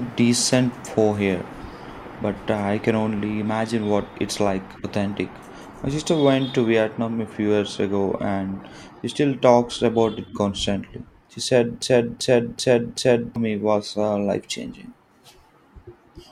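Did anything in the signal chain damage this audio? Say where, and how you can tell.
Yes: a broken-record loop, 11.82 to 13.36 s, repeats one 0.38 s fragment exactly four times, likely from a stalled playback buffer. Echo would decay instead.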